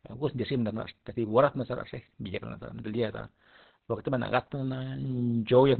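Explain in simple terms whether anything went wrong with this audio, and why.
The speech sounds muffled and hoarse from start to finish, with nothing above about 4.2 kHz, so it resembles an old phone line. The likely cause is heavy Opus compression, which switched to its speech mode and cut away the upper range to save data.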